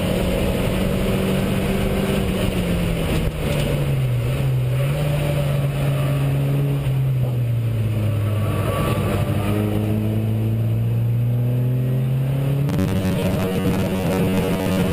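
At 9.84 s a single sharp tick cuts through the audio, broadband and unrelated to what surrounds it, gone as quickly as it arrives. This is a bit error spike: one sample had a single bit flipped somewhere in memory or on a digital link, so its value leapt by a power of two and snapped straight back on the next sample, producing a click with no tonal character of its own.

From 12.69 s to the end at 14.93 s the sound turns rigid and metallic, overlaid with a steady buzz near 93.8 Hz that stays fixed while the underlying audio still roughly tracks its original shape. This is robotic sound from repeated short buffers, likely caused by audio arriving too seldom, so the playback fills the gaps by looping the last fragment of about 10.7 ms. Around half of the material is such repeats, and the fixed loop length imposes that buzz pitch.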